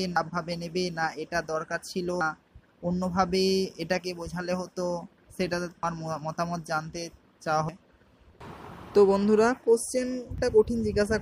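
Five short blips break up the audio, at 0.16, 2.21, 5.83, 7.69 and 10.38 seconds, and they all come from damaged data in a compressed stream. At each of those spots some of the encoded bytes were lost, zeroed or overwritten, so the decoder couldn't make sense of the frame there. It loses sync and has to hunt for the next valid frame header, and that brief stumble comes through as a quick chirp, squawk, click or short hole each time.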